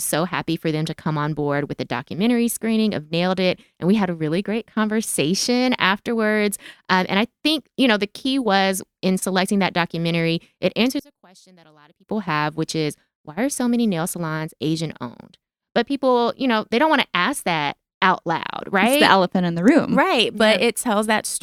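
From 11.00 to 12.08 s, after "selecting that documentary it", one channel inverted is the likely cause: one side's reversed polarity cancels the shared centre content when summed to mono. The speech drops by about 29 dB to a faint residue before "have which is why".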